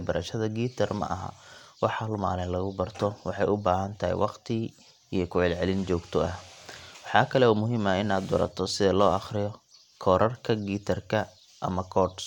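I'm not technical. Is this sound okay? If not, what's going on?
Yes, this speech recording has no technical problems.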